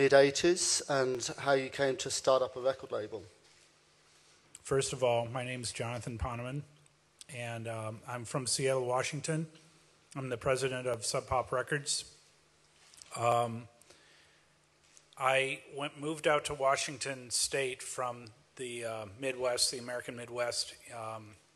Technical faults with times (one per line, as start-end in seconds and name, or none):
1.15 dropped samples
10.94 dropped samples
13.32 dropped samples